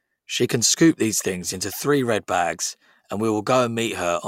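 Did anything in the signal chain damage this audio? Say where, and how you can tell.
No, nothing along the chain from capture to playback left any audible mark on this speech, so there's nothing here to trace back to a particular stage.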